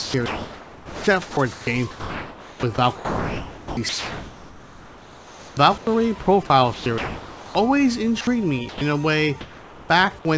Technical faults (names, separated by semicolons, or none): sound chopped by the voice detector; sound dropped by the voice detector; comfort noise in place of the background; onset clipped by the voice detector